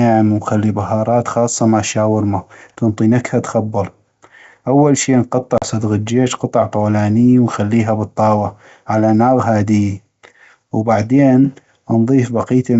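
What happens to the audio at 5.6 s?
Between 5.58 and 5.64 s there is packet loss on an ADPCM call: about 40 ms of audio, a couple of packets' worth, vanishes into a hard-edged silent hole. The telling sign comes afterwards. Because the G.722 decoder's adaptive predictor and step size have drifted from the sender's, the speech resumes with brief, slight distortion, settling within tens of milliseconds. A plain dropout would simply resume cleanly.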